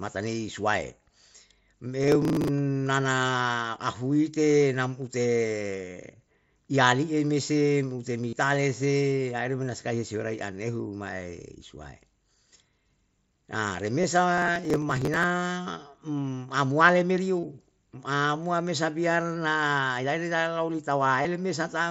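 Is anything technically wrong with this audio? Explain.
Yes. The processor fell behind on its tiny audio buffers, probably around 1.5 ms each, and skipped them, so processor overload crackle tears through the speech from 2.04 to 2.48 s, just before "nana ahuite nam", and again from 14.38 to 15.24 s.

Voice packets between the headset and the phone were dropped, and the receiver filled each gap by repeating recent waveform. This concealed Bluetooth headset packet loss leaves short buzzy holds with a slight warble where real audio resumes: about 37.5 ms at 8.29 to 8.33 s, before "se aire me na", about 22.5 ms at 14.01 s, about 30 ms at 17.40 s and about 22.5 ms at 21.22 s. The link itself runs over the wideband mSBC headset codec.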